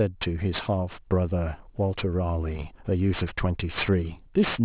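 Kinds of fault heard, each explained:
Aliasing: the speech sounds as if it was resampled to a lower rate with no low-pass filter first, which fits a drop to about an 8 kHz rate. Content above the 4 kHz fold point is mirrored down into the band as false, unrelated pitches, so sibilants turn gritty and metallic. The aliased energy sits roughly fifteen decibels below the speech. A spectrogram shows energy packed hard up to a 4 kHz ceiling, with upper harmonics reflected downward.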